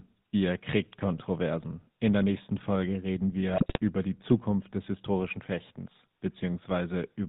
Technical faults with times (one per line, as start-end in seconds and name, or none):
0.00-7.28 GSM full-rate codec
3.54-3.79 GSM bit errors